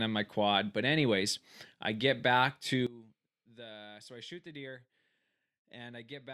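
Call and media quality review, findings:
Speech collapses to a faint residue from 2.87 s to the end, about 20 dB down. Likely one channel inverted in the stereo path. The reversed polarity cancels the shared centre content at mono fold-down, leaving only the channel difference.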